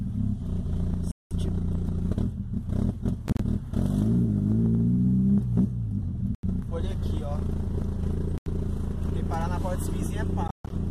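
Sound cuts out abruptly at 1.11, 3.28, 6.35, 8.38 and 10.48 s, gaps of 0.07–0.2 s, some broken up, resuming as if it kept playing. That's likely a Bluetooth dropout, with packets arriving too late.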